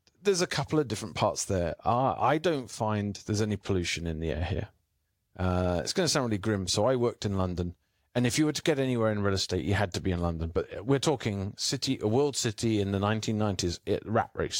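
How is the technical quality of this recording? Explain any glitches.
No technical glitches can be heard anywhere in this speech recording. Nothing in the audio calls for an explanation.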